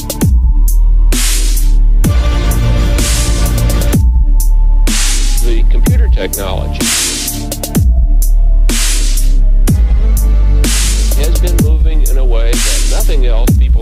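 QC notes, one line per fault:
0.61–1.57 s, 4.90–5.60 s and 9.07–10.03 s, drift correction step: the audio runs about 6.3% fast and roughly a semitone sharp (105 cents) in the first span, then about 6.3% slow and 112 cents flat in the other two, snapping back each time. This is likely a clock-matching resampler changing rate in one step to refill or drain its buffer.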